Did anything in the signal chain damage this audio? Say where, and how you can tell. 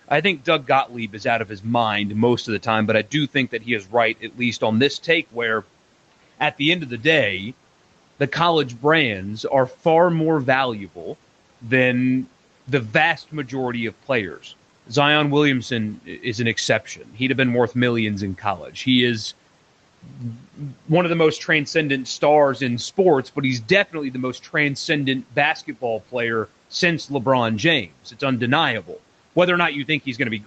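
Yes: speech cut by the noise suppressor in the call processing, at 0.08–1.66 s, 2.46–5.64 s, 16.96–17.17 s (after "is an"), 18.38–18.86 s and 20.03–20.89 s. The suppressor mistook quieter speech for background and pulled it down by about 9 to 12 dB, leaving those passages swallowed and faint.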